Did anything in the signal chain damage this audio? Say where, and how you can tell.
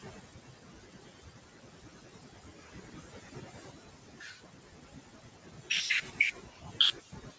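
Yes. The call processing's noise suppressor is working on the signal frame by frame throughout. It pulls down the bands it judges to be steady noise, so the room noise, sitting about 18 dB under the speech, sinks between phrases and swells beneath them, leaving a residue.

The same suppressor is also cutting the speech itself, mistaking parts of it for noise. From 0.0 to 5.7 s, most of that stretch is turned down by up to about 18 dB, and from 6.01 s to the end a shorter portion drops by up to about 17 dB, so syllables sound swallowed and faint.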